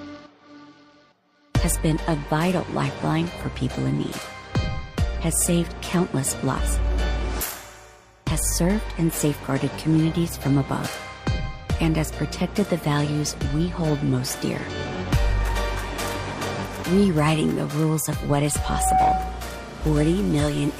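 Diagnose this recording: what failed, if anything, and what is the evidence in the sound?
The codec stage shows damaged data in the compressed stream. Brief blips sound at 6.55 to 6.61 s and 19.79 to 19.84 s, each about 55 ms. The decoder hits corrupted frames there, loses sync and hunts for the next valid frame header.

A loudspeaker feedback squeal sits in the analogue acoustic path from 18.44 to 19.55 s. A single tone near 749 Hz swells over roughly half a second. It peaks about 5 dB above the programme. The microphone is re-amplifying its own loudspeaker with loop gain above one.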